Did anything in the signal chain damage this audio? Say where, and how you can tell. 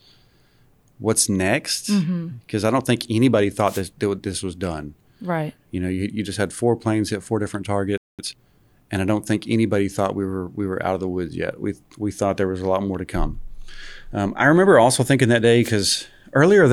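Yes. A wireless microphone noise hit appears at 3.65 to 3.82 s and again at 15.62 to 15.72 s, just after "also thinking that day". This is the radio link ahead of the converter. As the FM carrier fades, receiver noise swells into a short swish over the speech. On a spectrogram each hit is a brief broadband smear; on the waveform, a noisy burst.

A playback stall cuts the speech off at 7.98 s, right after "planes hit four different", and nothing comes out until 8.19 s, a gap of about 212 ms. The likely cause is the player's buffer running dry or its thread being blocked. The waveform shows a flat line, and the spectrogram shows a clean vertical blank band.

Time-compressed catch-up follows from 8.19 to 8.39 s at 2x speed, ending before "and I don't think". The player clears its backlog by dropping and cross-fading small slices, so the speech hurries while keeping its pitch. On a spectrogram, harmonic spacing stays constant while syllable patterns are squeezed in time.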